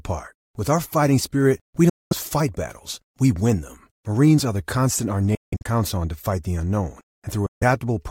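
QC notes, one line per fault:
1.89–2.13 s, Bluetooth dropout: after "our fighting spirit we" the sound cuts to silence for about 0.21 s, then resumes at "fight battles we win", likely from wireless packets arriving too late.
5.35–5.67 s, Bluetooth dropout: after "constant our" gaps, the longest about 0.17 s, remove about 0.23 s of sound before "on to fight the", likely because late packets were dropped in bursts.
7.46–7.63 s, Bluetooth dropout: after "to fight the unknown" the sound stops for about 0.15 s and resumes as though it had kept playing, likely because packets missed their delivery deadline.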